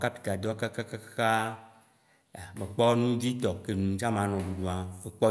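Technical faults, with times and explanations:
No technical faults can be heard in this speech recording, and the signal holds steady with no interruptions or damage at any point.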